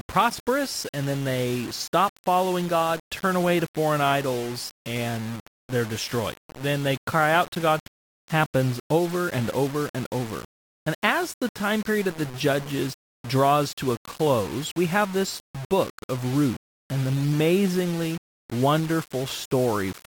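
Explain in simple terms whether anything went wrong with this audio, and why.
Throughout the speech there is a grainy, rough distortion that shifts with the voice and turns gritty on quiet passages. This is likely low bit depth without dither: the sound was rounded to about 5 bits, so the error tracks the voice instead of staying a smooth hiss.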